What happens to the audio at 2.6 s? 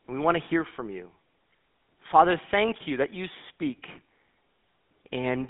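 At 2.6 s the speech carries the buzzy, gravelly roughness of the GSM full-rate codec, present throughout, with regular-pulse excitation and nothing above 3.8 kHz.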